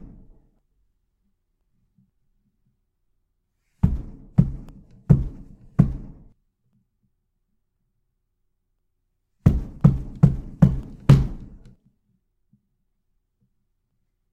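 Evenly spaced ticks run through the sound from 0.59 s to 13.91 s, one every 1.024 s, around fifteen in all. These are periodic USB or driver dropouts: the audio path stalls briefly each cycle, and about half a millisecond of signal is replaced by silence.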